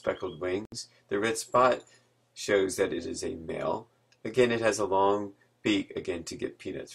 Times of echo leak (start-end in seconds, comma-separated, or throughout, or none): none